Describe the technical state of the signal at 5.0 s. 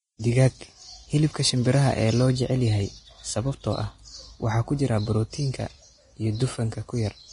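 At 5.0 s the speech sits under heavy lossy coding, likely Vorbis compression at a low bitrate, running throughout the clip. Nothing remains above 10.6 kHz, and the coarsely quantised treble turns fine detail into hiss, leaving sibilants grainy and attacks blurred.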